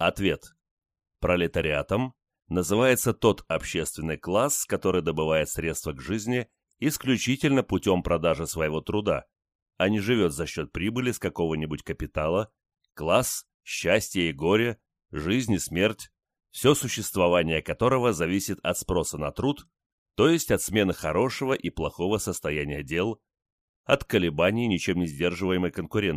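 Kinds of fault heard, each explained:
No faults can be heard.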